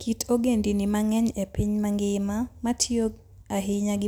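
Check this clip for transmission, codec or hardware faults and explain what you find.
No transmission, codec or hardware faults can be heard anywhere in this speech clip.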